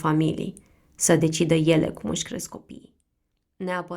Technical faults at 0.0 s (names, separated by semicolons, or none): none